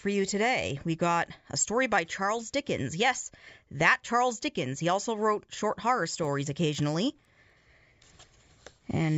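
A resampler restarted on every block affects the audio from 6.0 to 7.5 s, heard as a steady ticking at 4 per second that rides on the signal. The conversion from 16 kHz to 48 kHz was done block by block, each 250 ms long, and the converter treated every block as if nothing existed beyond its edges. Lacking the real neighbouring samples, it left a small error at each boundary, and those discontinuities produce the regular ticks.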